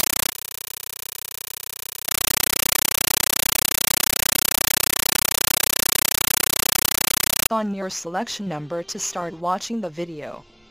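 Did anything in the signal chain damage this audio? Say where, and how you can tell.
Yes. From 0.0 to 7.50 s the output is a compressed stream played as audio: very loud chattering static replaces the program, built from noise bursts about 9.33 ms long repeating at 31.25 Hz, each followed by digital silence. That burst-and-padding pattern points to an AC-3 (Dolby Digital) bitstream, possibly at 448 kbps, sent over the S/PDIF or HDMI playback link and treated as PCM samples instead of being decoded.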